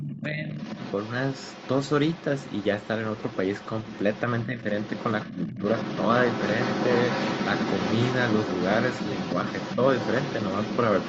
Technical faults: speech suppressed in double talk; other side's voice leaking through

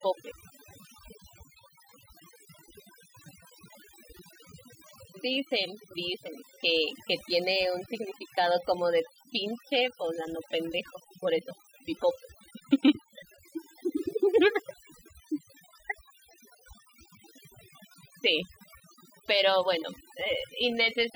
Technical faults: overdone noise removal

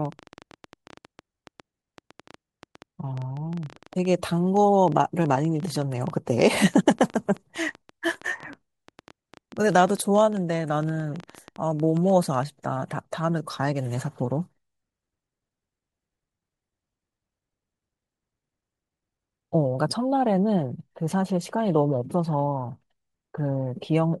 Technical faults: train of clicks

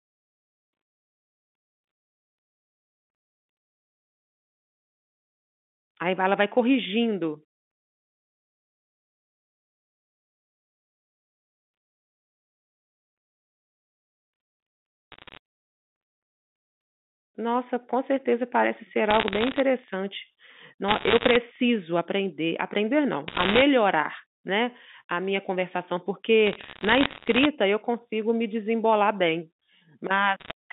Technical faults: bit errors on a digital phone line

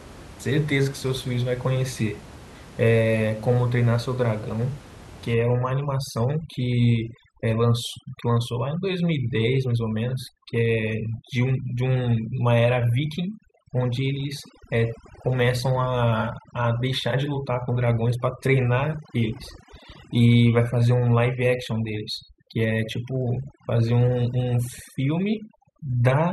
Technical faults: overdone noise removal

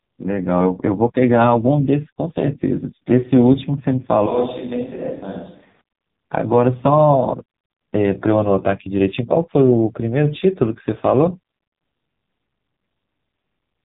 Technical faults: AMR narrowband mobile codec

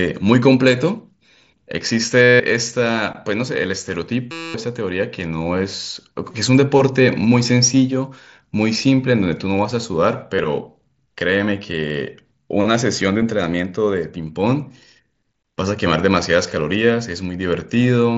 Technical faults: concealed Bluetooth headset packet loss

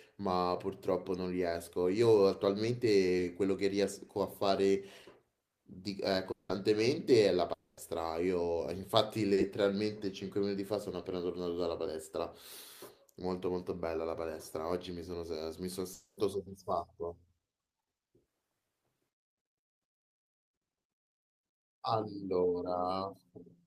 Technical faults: short concealed packet loss; long network dropout

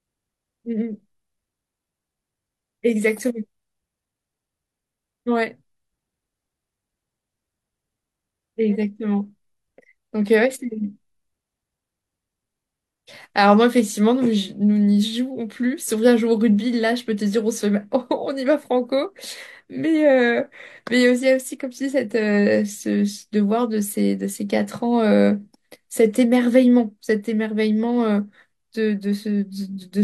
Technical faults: none

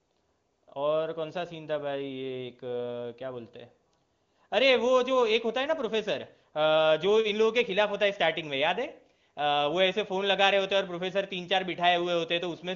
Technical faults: none

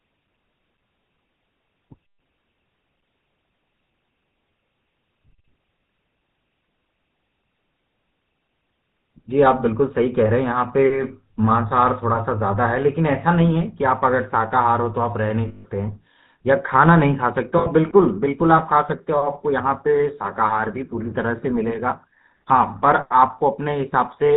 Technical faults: GSM full-rate codec; lost GSM frames

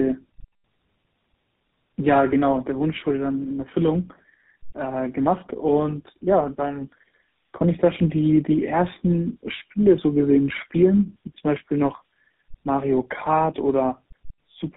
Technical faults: tandem speech coding

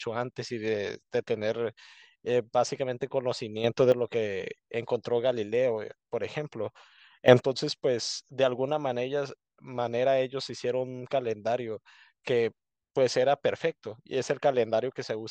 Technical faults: sudden gain jump

